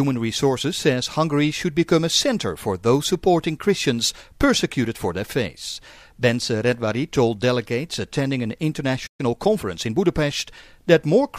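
At 9.06 s the sound cuts to silence until 9.20 s, a playback stall, likely from the player running short of data or having its output thread blocked. From 9.20 s to 10.00 s comes time-compressed catch-up: the audio runs about 1.15 times fast at unchanged pitch.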